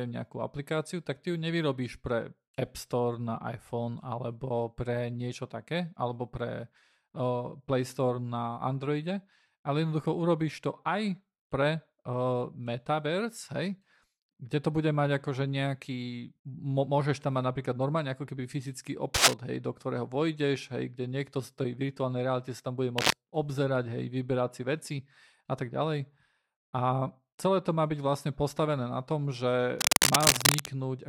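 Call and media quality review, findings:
Cable scratch noise, three bursts over the speech: 19.14–19.34 s (roughly 10 dB above the speech), 22.98–23.14 s and 29.79–30.67 s (both a few dB above). Scratchy, rustling texture. Likely a worn cable, connector or control being moved, its contact resistance jumping rapidly. Spectrogram: ragged broadband vertical smears, uneven density. Waveform: dense, irregular spiky clusters riding over the speech envelope, the last one longest at nearly 0.9 s.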